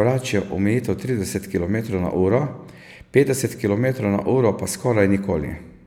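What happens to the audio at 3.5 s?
Nothing goes wrong at 3.5 s; the audio there plays through intact, with no fault to be heard at that moment.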